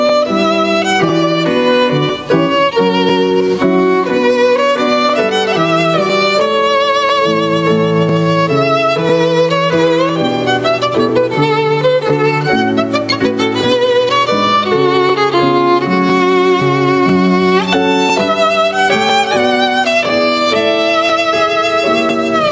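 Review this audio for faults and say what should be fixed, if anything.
There's gain pumping running through the whole clip, with the level swinging by something like 10 dB. Loud and quiet parts end up sitting unnaturally close together, so it all feels squashed. The likely cause is input gain set far too hot for the mic, with a fast limiter clamping down on each peak and then releasing in the pauses. The call mic processing's band limit, with nothing above 8 kHz, is normal for a call and doesn't need fixing. To prevent the pumping, pull the mic's input gain down until the loud moments stop hitting the limiter.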